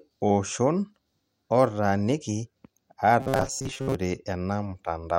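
Speech, and from 3.20 to 3.95 s it collapses into robotic sound from repeated short buffers: a stiff, metallic buzz around 134 Hz that only loosely tracks the talking. That's likely late audio being covered by looping roughly 7.5 ms chunks, with most of the real signal skipped.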